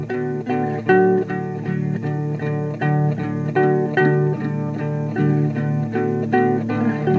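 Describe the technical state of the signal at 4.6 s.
At 4.6 s the music is intact, with no dropout, click or distortion; the call codec adds only its normal coding noise and band limit, which leaves nothing above 8 kHz.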